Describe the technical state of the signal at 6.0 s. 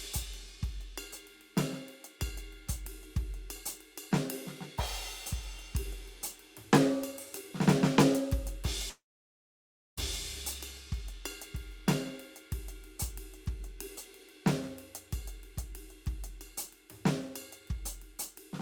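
At 6.0 s the music plays through intact, with no dropout, click, distortion or other technical fault at that moment.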